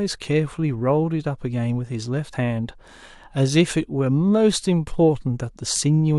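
At 2.32 s the speech jumps forward, dropping roughly 70 ms of sound. These are compressed frames skipped: whole coded frames were missing or rejected by the decoder.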